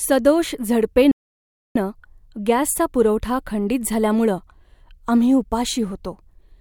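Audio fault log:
1.11–1.76 s, playback stall: the speech cuts to silence for about 640 ms, likely because the player ran out of buffered data or its thread was blocked.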